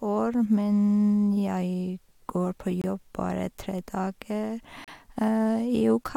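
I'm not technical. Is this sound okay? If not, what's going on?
No, there are two tiny dropouts in the speech: a gap between stream segments at 2.82 s, between "jeg går på" and "bare tre", and again at 4.84 s. Each is a sharp silence about 25–35 ms long where the timing of two 2-second chunks left a small gap that the player filled with silence. Nothing is actually lost.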